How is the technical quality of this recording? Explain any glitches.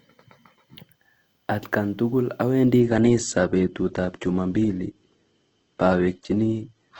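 The recording has one clear fault: from 2.80 s to the end, the speech suddenly loses its treble and takes on a thin, smeared quality. This is an adaptive stream at a lower bitrate. Right after "tukul awendi", the stream switches to a much cheaper encoding without any gap, which fits a drop from about 64 kbit/s Opus to around 12 kbit/s. Nothing remains above 8.3 kHz, so sibilants dull, and coarser coding adds audible artefacts until the clip ends.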